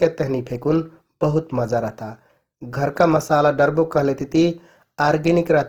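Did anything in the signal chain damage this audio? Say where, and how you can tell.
Yes, at the codec: likely Opus compression at a rate fitting 16 kbps fills starved bands with noise, so the speech sounds grainy and rough throughout, though extending to 20.3 kHz.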